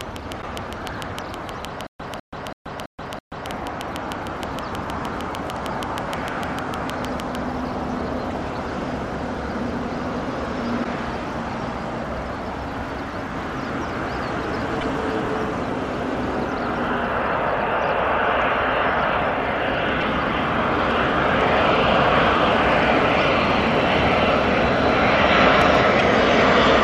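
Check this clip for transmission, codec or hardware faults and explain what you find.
Three kinds of fault are present: a click train, damage to the MP3 bit reservoir, and a stutter with silent gaps.

Train of clicks, 0.01 to 7.36 s: about fifty near-identical pulses at a regular 6.5 per second, peaking around 15 dB above the programme. They tick through quiet moments too, which points to a likely electrical injection such as interference rather than anything in the recording. Their fixed shape and steady pace distinguish them from random dropout pops.

Broken MP3 bit reservoir, at 0.41, 8.30, 10.83, 14.80, 20.00 and 25.98 s: each is a chirp, noise burst or short hole of roughly 30 ms, about one 26.1 ms frame. The likely cause is missing frames, so the next frame decodes with borrowed bytes from the wrong frame. The audio also jumps ahead, unlike an isolated click.

Stutter with silent gaps, 1.87 to 3.47 s: a 201 ms fragment plays five times, each followed by 129 ms of digital silence, on a steady 331 ms cycle. 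This points to a likely stalled player replaying its last buffer on each retry. The true digital silence and the repeated material set it apart from ordinary dropouts, and the audio meant for that stretch is lost.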